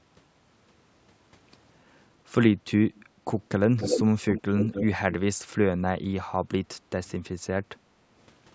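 Speech with three bursts of echo leak: a faint one at 2.95 to 3.05 s, one about as loud as the talker at 3.77 to 4.02 s, and a somewhat quieter one at 4.28 to 4.86 s. Each is a delayed copy arriving 298 ms, then 273 ms behind, likely from a far-end loudspeaker whose echo canceller let part of the returned signal through. From 6.77 to 6.91 s the background is gated by the echo canceller, with room sound dipping by about 19 dB for roughly 150 ms as the canceller clamps the microphone, then recovering.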